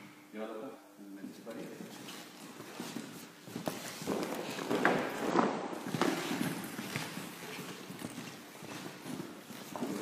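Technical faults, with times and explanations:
0.70, 1.95, 3.21, 5.30, 7.99, 9.01 and 9.85 s: compressed frames skipped. At each point the audio jumps forward between about 0.3 and 1 s, in steps of roughly 46 ms frames.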